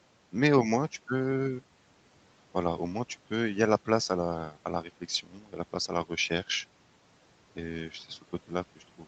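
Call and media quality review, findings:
Speech cut by the noise suppressor, 5.23 to 5.54 s. Speech dips by up to about 11 dB for roughly a third of a second; soft consonants and word tails sound swallowed. Probable component: call noise suppressor, misreading low-level speech as background and attenuating it with the room noise, which sits about 22 dB under the speech. The band stops at 8 kHz, consistent with a wideband Opus call setting.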